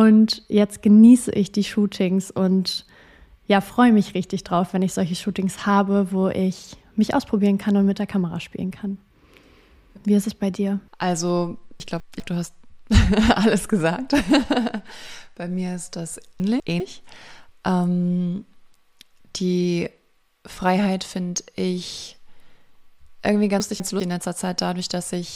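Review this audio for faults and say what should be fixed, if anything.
Three brief jumbled moments at 11.8–12.2 s, 16.4–16.8 s and 23.6–24.0 s are chunks out of order. Each time, a 200 ms chunk arrives one slot late and swaps places with its neighbour, leaving three hard joins. Reorder chunks by sequence number before playback or writing.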